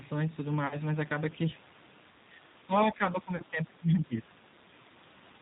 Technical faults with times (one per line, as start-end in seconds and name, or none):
0.00-5.41 G.729 codec
0.67-0.77 VoIP packet loss concealed by the speech codec
2.24-4.43 speech suppressed in double talk
3.36-3.43 VoIP packet loss concealed by the speech codec